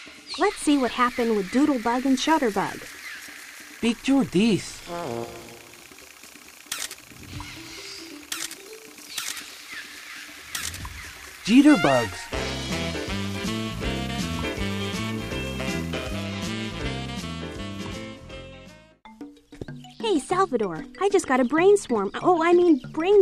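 Nothing here calls for attention, since the audio runs along with no technical faults to point out.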